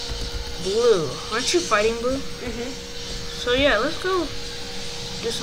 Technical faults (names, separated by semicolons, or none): switching supply whistle